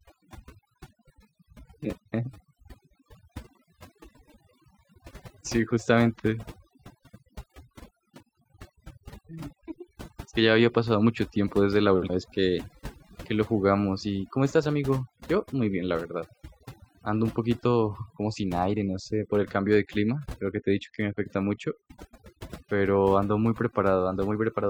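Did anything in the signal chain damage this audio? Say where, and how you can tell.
Yes. Overdone noise removal runs throughout this speech, at the call-processing stage. A suppressor set too aggressively pulls individual frequency bands down wherever they resemble its noise estimate. The background drops and breaks up into twinkling specks, and quieter parts of the voice vanish too.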